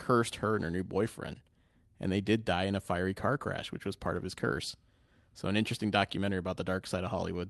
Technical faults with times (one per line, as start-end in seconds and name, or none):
none